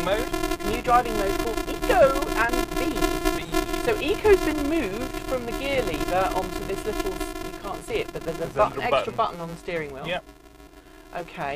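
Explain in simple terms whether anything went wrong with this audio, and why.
Filter restarted on every block, throughout the clip: the filter starts fresh every 128-sample block, adding a tiny tick each time, heard as a 345 Hz buzz that follows the sound's loudness.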